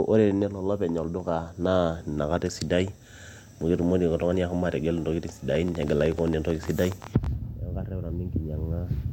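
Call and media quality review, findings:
Train of clicks over speech, 5.55–7.27 s: about 20 similar pops, irregular spacing, roughly 12 per second, peaking about 5 dB above the signal. Likely interference or a faulty connection or power supply injecting pulses. Waveform shows sharp spikes; spectrogram shows thin broadband vertical lines.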